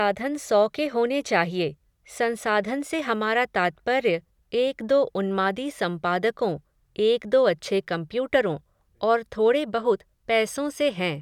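A speech recording with no technical faults. Nothing in the audio points to a problem in how it was captured, processed or delivered.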